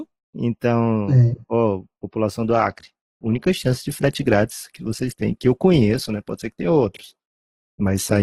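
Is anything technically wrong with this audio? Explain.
Yes. From 2.39 s to the end, the audio switches to an adaptive stream at a lower bitrate. The connection slowed and the player swapped without a gap to a leaner encoding, consistent with Opus dropping from about 64 to 12 kbit/s. Treble vanishes above 12.2 kHz, and codec artefacts rise.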